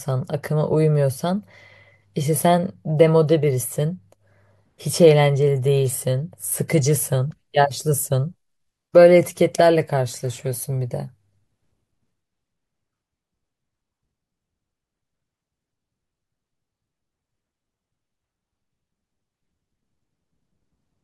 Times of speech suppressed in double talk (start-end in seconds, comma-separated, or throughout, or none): none